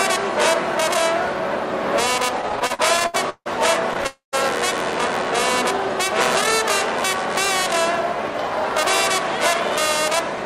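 Packets arriving late kept starving the jitter buffer from 2.41 to 3.48 s, causing repeated stalls (stutter): eleven short gaps, the longest 161 ms, are filled by stretched, continued sound, so the audio drags and stutters. At 4.07 s a likely network hold-up emptied the buffer entirely, producing a call audio freeze: about 0.26 s of fading continuation, ending in 140 ms of silence, before the audio resumes at 4.35 s.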